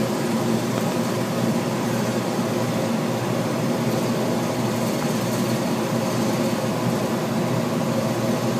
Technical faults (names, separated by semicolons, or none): loud pop